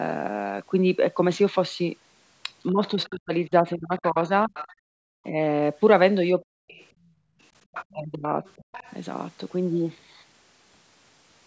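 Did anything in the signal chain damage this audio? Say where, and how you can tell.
Yes, other side's voice leaking through at 2.67–4.73 s and 6.44–8.94 s, about 15 and 20 dB below the speech, is likely residual loudspeaker echo the call's echo canceller failed to remove.

Speech suppressed in double talk: dips of about 30 dB within 2.69–5.34 s and 7.93–8.68 s, plus a brief 10 dB dip at 6.38 s, likely as the canceller ducked overlapping speech.

Background gated by the echo canceller: room sound drops about 39 dB at 4.83–5.01 s and about 20 dB at 6.93–7.39 s, as call processing muted the microphone during playback.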